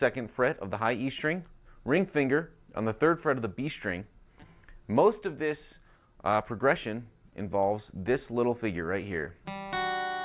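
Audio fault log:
Nothing stood out on listening to this clip.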